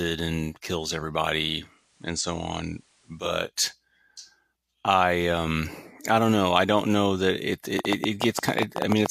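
A speech recording with two separate faults. Just after "and kills", at 1.52 s, the receiver lost its digital signal, and the digital radio blending to analogue took over. It cross-faded over about half a second to the FM broadcast of the same station and stayed there until 3.54 s before returning to digital. During that stretch the level drops by about 2 dB, and a low hiss sits roughly 35 dB under the speech. Later, from 7.79 s to 9.07 s, a train of clicks runs over the audio, most likely from electrical interference or a struggling interface injecting pulses. Around fifteen similar clicks arrive at an uneven pace averaging 11.1 per second. They peak well above the speech, so they come across as sharp, irregular ticking that continues until just before the end of the clip.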